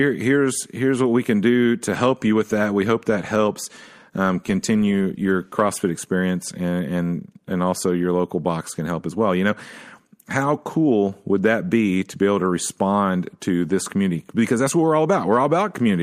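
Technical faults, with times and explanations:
No technical faults can be heard anywhere in this speech recording. There is nothing to mark with a time or to explain.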